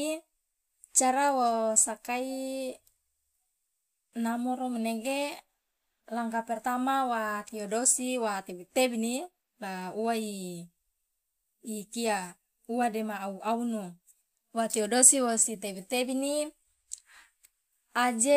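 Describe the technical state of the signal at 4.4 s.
At 4.4 s the signal is intact, with no dropout, distortion, glitch or other technical fault audible at that point.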